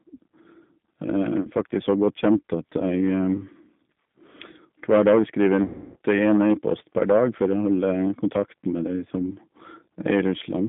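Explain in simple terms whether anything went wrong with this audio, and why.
Two things went wrong. Throughout, the speech passes through the G.729 codec, a low-rate phone-call codec that rebuilds the voice from a simple model. That leaves it thin, cut off above about 3.6 kHz, and audibly rough and synthetic, unlike a plain phone line, which just sounds muffled.

There is also VoIP packet loss concealed by the speech codec: a brief stretch at 1.42–1.47 s and a longer one from 5.63 to 5.96 s. Rather than falling silent as in a simple dropout, the decoder stretches the last bit of voice into a buzzy tone or coloured noise that fades, which is most obvious in the longer gap.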